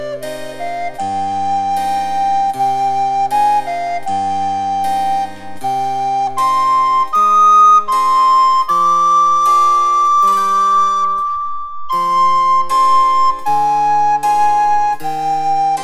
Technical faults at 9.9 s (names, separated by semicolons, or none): dropped samples